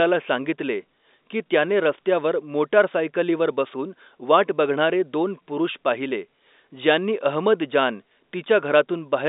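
The speech sits in an ordinary telephone band of roughly 250 Hz to 3.7 kHz with nothing above 3.8 kHz, which fits G.711 A-law telephone coding at 64 kbps, and no technical faults can be heard in it.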